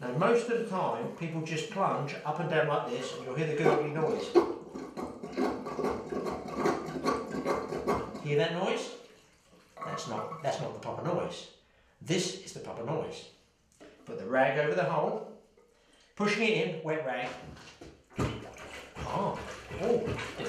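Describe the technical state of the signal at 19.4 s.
At 19.4 s the signal is intact, with no dropout, distortion or other fault at that point.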